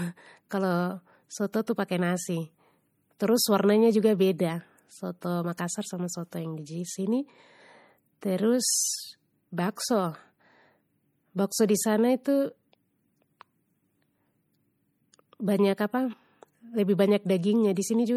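Throughout the speech, coding damage is plainly audible. Nothing is present above 20.9 kHz, a hard ceiling rather than a natural roll-off. This points to MP3 compression, likely at a low bitrate around 48 kbps. At that rate the encoder runs short of bits. It discards weak frequency lines, and they flicker in and out between frames. The result is a watery, swirling texture, with s sounds turning metallic and edges blurring.

At 1.52 s there is pre-echo. A sharp onset lands late within a coding block. The quantisation noise meant for the loud attack spreads across the whole block, including the quiet stretch just before it. That smear covers about 16 ms. It is heard as a brief hiss ahead of the attack. The onset itself loses its crispness and sounds softened.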